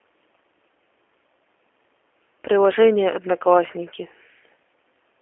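Throughout, the speech sounds narrow, slightly rough and synthetic, with nothing above 3.8 kHz and a phone-line band of roughly 300 Hz to 3.4 kHz. This is G.729 codec damage: each 10 ms frame is rebuilt from a vocal tract filter, a pitch predictor and a few pulses, which fits 8 kbit/s.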